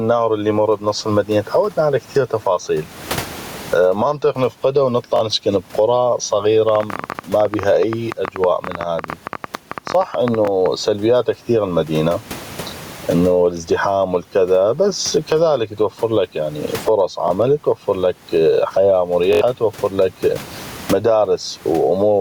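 Gain pumping runs through the whole clip. The level swings by around 25 dB, and the background sits about 37 dB below the speech. The likely cause is input gain set far too high, with a fast limiter or compressor pulling it down on each peak. Loud and soft passages are squeezed toward one level, and the speech sounds flattened and breathing.

The first repeated buffer comes at 2.62 to 2.65 s, just after "المدينة تعودنا على كثيغ". A block of about 21 ms plays twice, which fits a 1024-sample buffer that the device replayed because fresh audio arrived late. It sounds like a brief stutter with a hard edge at the join. At 5.16 to 5.21 s a block repeats twice more, and roughly 40 ms of audio is lost.

From 6.69 to 10.67 s a train of clicks sits over the sound. It is about 50 similar pulses at roughly 12.6 per second with uneven spacing, peaking around 10 dB above the signal and continuing through pauses. 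This is likely interference from nearby equipment or a faulty connection or power supply, and it is heard as irregular ticking. Inside that stretch, at 10.45 to 10.48 s, another single buffer repeat adds a short stutter.

Two more repeated buffers follow. At 17.28 to 17.30 s, just before "توفرلك حياة", one block plays twice. At 19.33 to 19.41 s, just after "توفرلك حياة", the block plays four extra times. About 100 ms of audio is lost, and the repeats run together into a short buzz-like stammer.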